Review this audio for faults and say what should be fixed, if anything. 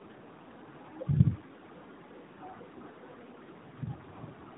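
Tandem speech coding affects the whole clip. The speech passed through two low-rate speech coders in a row. It was decoded and coded again at a link border in between, which fits AMR narrowband coding on both sides of a standard telephone-law link. The second coder had to work on the first one's errors. The result is rough, muffled and warbly speech. Nothing is present above 3.8 kHz. To prevent it, keep one codec end to end, or negotiate transcoder-free operation between the links.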